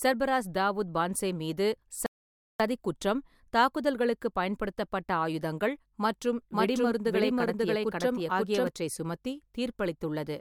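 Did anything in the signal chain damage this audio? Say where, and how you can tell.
Yes. At the playback stage, the player's buffer ran dry. After "சர்பராஸ் தாவூத் பான்சே மீது" the speech drops to silence from 2.06 to 2.60 s, then resumes at "குற்றம் தாக்குதல்களுக்குப் பயன்படுத்தப்பட்ட ஆயுதங்கள்" exactly where it stopped. That is a rebuffering stall: nothing is lost, but 0.54 s is added.

A doubled audio track starts abruptly just after "தாக்குதல்களுக்குப் பயன்படுத்தப்பட்ட ஆயுதங்கள் மற்றும்" and runs from 6.53 to 8.67 s. A second full-band copy of the speech trails by roughly half a second at about the same level, with no decay or room colour. This likely comes from a slower second capture path or an edit holding two offset copies.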